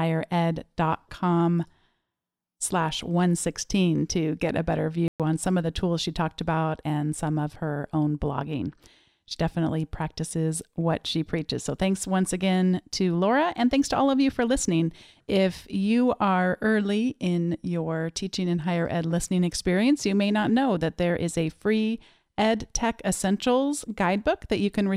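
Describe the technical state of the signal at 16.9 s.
At 16.9 s the speech signal is intact, with no fault audible at that moment.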